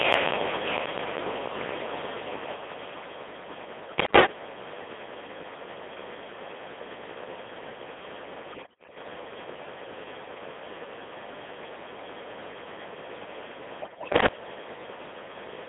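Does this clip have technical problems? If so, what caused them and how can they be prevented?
Yes. The Codec 2 vocoder colours the whole clip. The speech is rebuilt from pitch, voicing, energy and a spectral envelope using sine waves instead of the original waveform, so it sounds robotic and buzzy, squeezed into a band of about 300 Hz to 3.6 kHz. The heavy damage fits a low mode of around 2.4 kbit/s. This can be prevented by recording or relaying through a higher-rate codec that preserves the waveform.

Bit errors on digital voice radio hit at 3.88 to 4.26 s, 8.52 to 8.96 s and 13.82 to 14.28 s. Corrupted bits garble whole frames of pitch, level and spectral data, so the voice lurches and warbles into bleeps. Errors worsen each time, from a few percent to about ten. This can be prevented with a stronger signal margin or added forward error correction.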